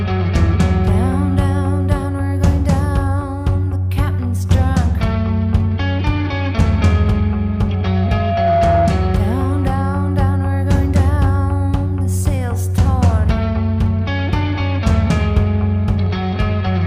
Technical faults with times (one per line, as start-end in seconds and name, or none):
7.83-9.06 loudspeaker feedback squeal